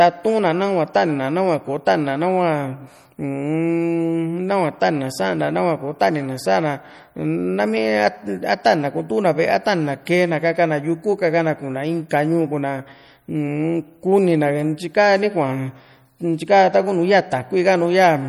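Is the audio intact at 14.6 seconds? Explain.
No. At 14.6 s, as throughout the clip, MP3 compression damage is plainly audible: starved weak frequency lines switch on and off between frames, giving watery, swirly speech, which likely fits a bitrate around 48 kbps. A spectrogram would show flickering holes and patches in the upper bands.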